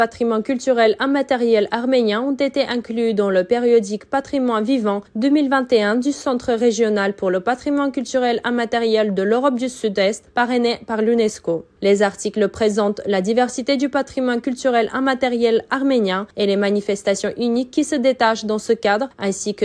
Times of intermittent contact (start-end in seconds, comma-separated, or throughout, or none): none